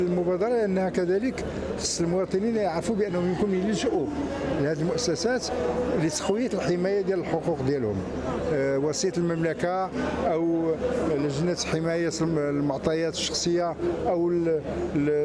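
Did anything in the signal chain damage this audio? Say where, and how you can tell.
No, nothing along the chain, from capture through to playback, leaves an audible mark on this audio. No stage shows evidence of damage that a listener could point to at any moment in the clip.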